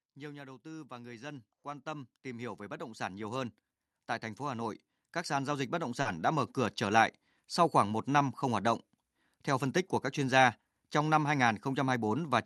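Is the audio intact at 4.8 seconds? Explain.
No. Automatic gain rising runs from 4.46 to 6.6 s: the gain control, judging the input too quiet, lifts the level by about 7 dB, swelling voice and background together.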